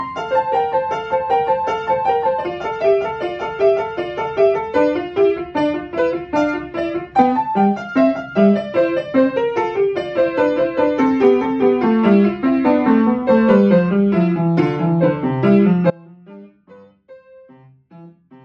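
The wanted signal was likely lost upstream while the path after the break stayed live, giving an audio dropout to a faint residue from 15.90 s to the end: the sound cuts abruptly, leaving only a faint sound roughly 25 dB below normal level.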